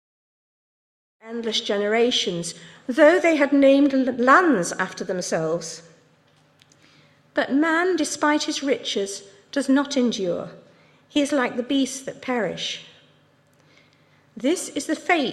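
Nothing stood out on listening; the sound rises in a gentle fade-in from around 1 s that is complete by 1.6 s, with no click or hard edge.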